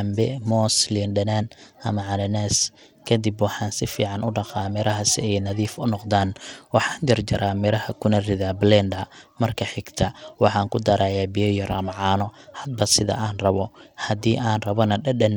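Right through the speech there's gritty, flickering treble with a rough edge on it, likely Bluetooth SBC compression starved of bits, which fits something around 96 kbps.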